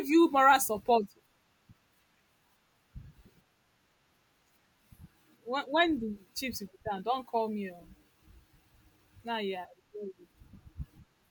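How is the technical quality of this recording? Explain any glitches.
The speech recording shows no technical glitches anywhere in its duration.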